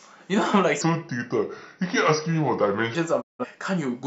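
From 0.81 to 2.95 s, the speech plays as a section at the wrong speed. It runs at 0.8 times its proper rate. Speed and pitch drop together, so the voice turns slow and heavy, about four semitones lower. The change is abrupt at both edges. The cause is likely a playback or edit clocked at the wrong rate for this stretch. Normal speed returns at 2.95 s.

At 3.20 s comes a digital broadcast dropout. The sound fades out over 20 ms and stays silent until 3.45 s. About 171 ms of programme is gone. That length fits four lost frames. The receiver muted rather than play damaged data. It resumed once clean frames arrived. Whatever was sent during the gap cannot be heard.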